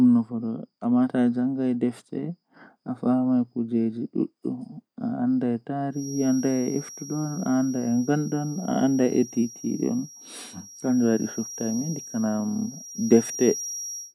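Speech recording with a thin, steady whistle near 5.7 kHz from 5.89 s to the end at 14.15 s. It sits roughly 15 dB below the voice and swells and fades slowly in level. It is a feedback whistle, likely from a loudspeaker-to-microphone loop held just short of runaway.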